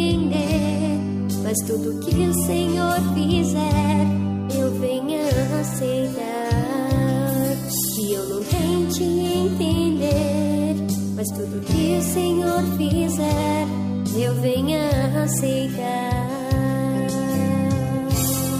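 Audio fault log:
No faults can be heard anywhere in this audio.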